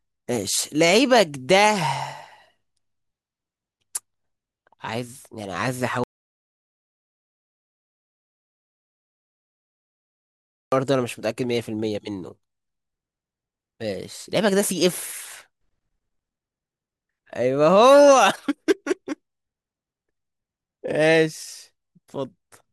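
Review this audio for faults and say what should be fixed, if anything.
At 6.04 s the speech cuts off mid-flow into dead silence, with no room tone, and returns abruptly at 10.72 s, so about 4.7 s of speech is missing. This audio dropout to silence likely came from the input being lost while the recorder kept writing silence. Securing cables and connections, and monitoring input levels during capture, would prevent it.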